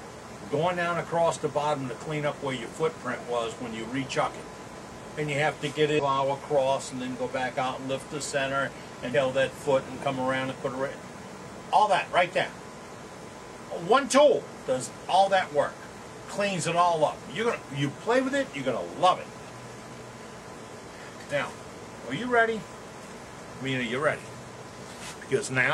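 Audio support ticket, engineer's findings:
Damaged data in the compressed stream at 5.95 to 6.00 s and 9.11 to 9.16 s. The decoder misreads corrupted frames, loses sync and hunts for the next frame header. Each event is a brief disruption of about 50 ms, heard as a chirp, squawk, click or short hole.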